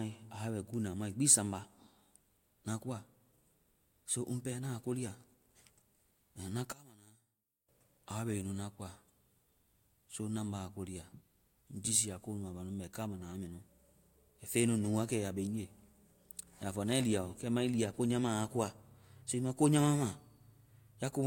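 From 6.72 to 7.69 s the speech collapses by about 24 dB to a faint remnant, likely from one channel inverted, cancelling the centred voice in mono.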